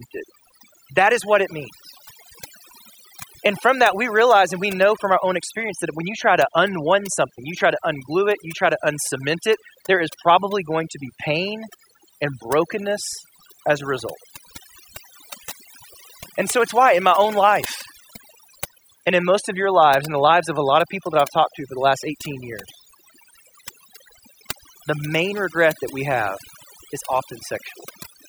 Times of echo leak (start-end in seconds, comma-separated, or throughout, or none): none